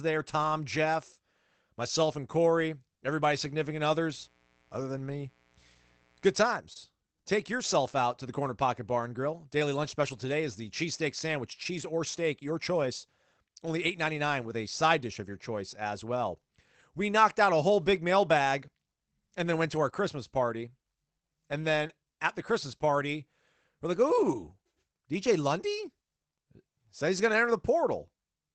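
A lost packet rebuilt from error correction opens the clip at 0.43 to 0.45 s. One 20 ms packet failed to arrive, and the decoder played the low-bitrate copy carried in the next packet instead. There is no gap, but that moment sounds briefly rougher and grainier. The call codec's cut-off near 8 kHz, which points to a 24 kbps Opus setting, dulls the whole recording.

From 3.43 to 6.49 s there is mains buzz. Switching spikes from the supply leaked into the signal twice per 60 Hz cycle, and their harmonics climb into the kilohertz range. The result is a faint, steady, raspy buzz sitting well below the speech.

At 6.73 to 6.77 s a short concealed packet loss occurs. About 20 ms of audio arrived too late, so the receiver extended the preceding sound and then blended back. The last part of this stretch, 6.75 to 6.77 s, was also rebuilt from error correction. Together these produce a brief smear.

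Longer error-correction rebuilds follow at 9.83 to 9.93 s, 11.51 to 11.61 s and 14.41 to 14.51 s. Each one restores about 60 ms, which fits three separate lost packets. Each stretch sounds coarse and noisy.

At 21.87 to 21.91 s another short concealed loss fills roughly 17 ms. The final 20 ms of it was rebuilt from the error-correction copy, and it is heard as a quick wobble.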